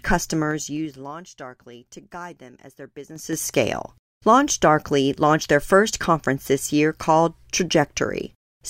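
Zipper noise: the level moves in unsmoothed steps, roughly ten per second, so the speech ticks while it drops about 20 dB in 2 dB steps from 0.43 to 1.20 s, then rises about 20 dB in coarser 5 dB steps from 3.07 to 3.41 s, after "guide them as their".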